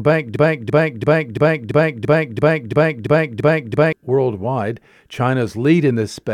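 From 0.36 s to 3.93 s the speech turns into a broken-record loop: a fragment about 0.34 s long plays eleven times back to back, each repeat identical, and whatever should have been heard in that span is gone. The likely cause is a stalled player or stream re-sending its last buffered chunk. On a waveform or spectrogram the same block shape tiles across the gap at a regular 0.34 s spacing.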